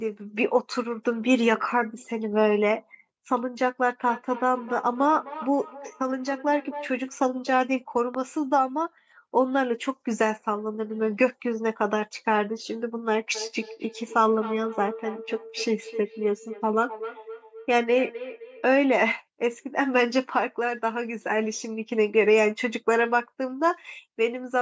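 From 4.04 to 6.95 s the speech picks up a feedback echo between two devices. A second device in the same room is on the call, and its loudspeaker replays this microphone's audio back into it. The local echo canceller only knows its own playback, so it lets this path through. Each phrase comes back roughly a third of a second later, peaking about 14 dB below the speech, with a thin, ringing tail.

At 8.15 s a single loud pop lands on top of the speech, which continues underneath. It reaches roughly 5 dB above the signal level. It is a short, sharp transient, most likely a voltage step from a plug, switch, static discharge or driver glitch, shaped by the circuitry after it.

The same feedback echo returns from 13.35 to 18.75 s, slightly stronger at about 12 dB below the speech. It repeats at the same interval of roughly a third of a second, so the same two-device loop is in effect.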